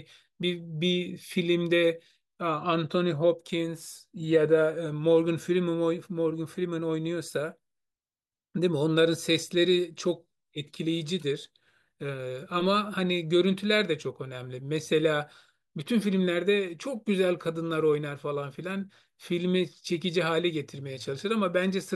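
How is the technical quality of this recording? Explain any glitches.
No audible glitches or faults in this recording.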